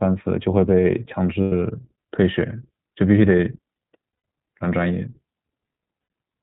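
The speech sounds band-limited, slightly rough and synthetic throughout, with nothing above 4 kHz: the iLBC codec at work, and the clear damage fits its 15.2 kbps, 20 ms frame mode. At 1.42 s, 4.14 s and 6.02 s, the sound turns briefly into a held, faintly buzzy vowel lasting 100, 100 and 80 ms. These are lost iLBC frames, which the decoder filled by repeating the last pitch cycle mixed with noise before recovering almost immediately.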